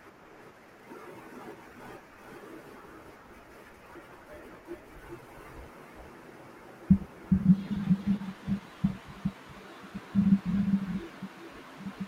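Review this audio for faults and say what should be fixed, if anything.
Doubled audio track throughout: a slower second capture path likely mixes in a full-band copy about 5 dB quieter, roughly 400 ms behind the speech. Feed the mix from a single capture path and remove any duplicate return.

Compressed frames skipped at 3.95 s and 6.80 s: missing or rejected frames make the speech jump ahead about 150 ms and 70 ms, each join a brief smeared blip. Re-encode or re-transfer from an intact source and check the file for damaged frames.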